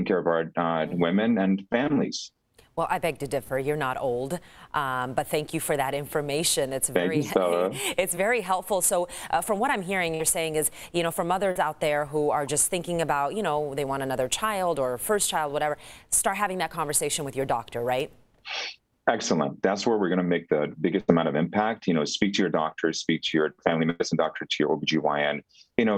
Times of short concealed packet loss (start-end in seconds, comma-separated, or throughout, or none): 8.15-8.17, 11.51-11.56